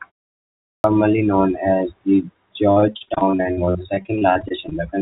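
Speech, and the first problem hits right at 0.55 s: after about half a second of quiet, the talker comes in abruptly with the opening 0.29 s or so simply gone. That's a clipped start after a pause. The output device dozed off during the silence and hadn't woken or re-locked in time, so the first sounds got swallowed. The bigger issue runs from 2.72 to 4.73 s, where repeated packet loss makes the voice choppy and robotic. There are 26 separate gaps, none longer than about 41 ms, each patched by stretching the last bit of sound. Roughly 29% of that stretch is concealed rather than real audio, which is why it sounds choppy. Everything sits under 4 kHz as well, which points to a narrowband call codec like G.711 on the line.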